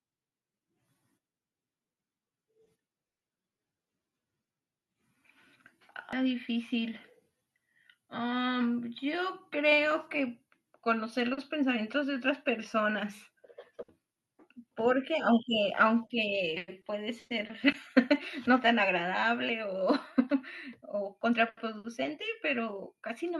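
At 6.13 s there's a short blip of damaged data in the compressed stream: the decoder hits corrupted bytes, loses sync and skips ahead to the next frame. Then from 17.72 to 18.16 s come CD scratch ticks, three tiny clicks, the longest around a millisecond, where damage beat the error correction and samples were patched over.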